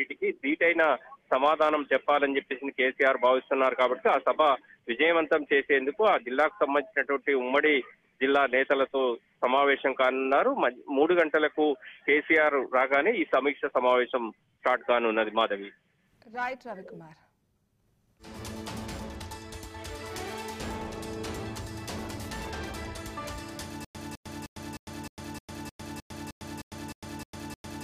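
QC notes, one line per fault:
23.85 s to end: stutter with silent gaps. A 206 ms fragment repeats 13 times, each followed by about 102 ms of digital silence, a steady 308 ms cycle. The likely cause is a stalled player or stream replaying its last fragment on every retry. The audio meant for that stretch is lost.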